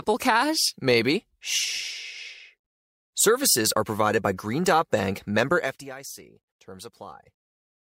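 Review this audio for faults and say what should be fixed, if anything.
No faults; nothing to fix.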